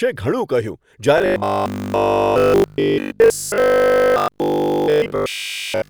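After "ઘણું કહ્યું", at 1.18 s, robotic sound from repeated short buffers begins and runs to the end. A rigid 50 Hz buzz replaces the speech, likely from 20 ms chunks repeating.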